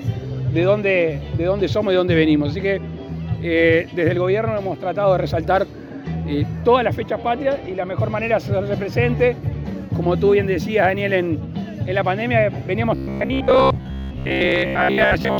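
Robotic sound from repeated short buffers runs from 12.96 s to 15.38 s. Across this stretch the audio collapses into a rigid, metallic buzz pitched at 66.7 Hz, which points to a slice roughly 15 ms long being played back-to-back. The likely cause is fresh audio arriving too slowly, so the playback side keeps looping that last short buffer to fill the gaps. For most of the passage, about 70 percent of it, the repeats stand in for the real audio, which is skipped.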